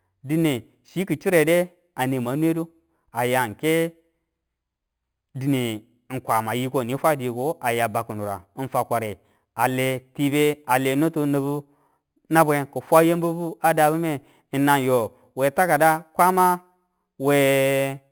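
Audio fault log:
Throughout, imaging from sample-and-hold upsampling. The speech carries a bright metallic fizz that rises and falls with its level. The pattern points to audio at about 11 kHz raised to 48 kHz by repeating each sample, with no smoothing filter. The lowest mirror copy of the spectrum fills 5.5 to 11 kHz, about 18 dB below the signal. Because it is flipped, this copy moves opposite to the pitch, which makes the fizz sound detached and metallic.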